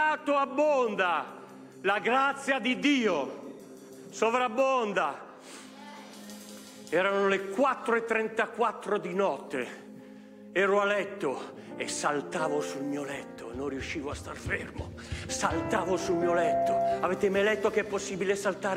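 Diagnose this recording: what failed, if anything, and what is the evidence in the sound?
Loudspeaker feedback squeal at playback, 15.68 to 17.08 s: a 680 Hz tone swells within a second to about 5 dB above the sound, as loop gain exceeds one.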